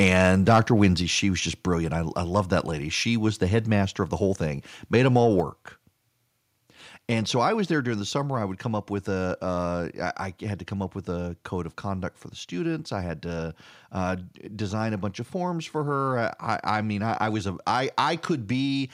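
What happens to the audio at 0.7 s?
Between 0.48 and 0.86 s, just before "she was just brilliant", the speech crackles from microphone overload: input likely set too high, driving peaks about 4 dB past the converter's limit. The waveform shows flat-topped peaks, and the spectrogram shows broadband smears.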